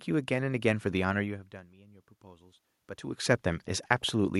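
From 1.23 to 2.68 s the automatic gain rising is audible. Around 1 s the talker moves away and the level at the microphone falls by about 24 dB. The gain control reacts by slowly lifting its gain by about 4 dB, so the voice and the room noise swell together. On the waveform the envelope ramps upward over roughly 1.5 s. A spectrogram shows the noise floor brightening across all frequencies at once, not just under the speech.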